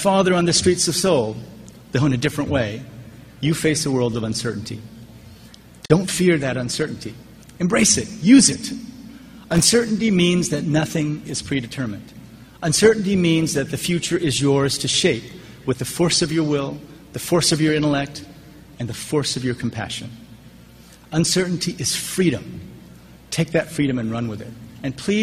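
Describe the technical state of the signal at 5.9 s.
A gap at a join of encoded pieces runs from 5.86 to 5.90 s, a silence of about 44 ms. The audio was encoded in separate pieces and then joined without trimming, so the encoder's start-up delay and the padding on the last frame of the earlier piece both remain. The continuous sound drops out suddenly, with edges smeared by the codec, then resumes exactly where it left off.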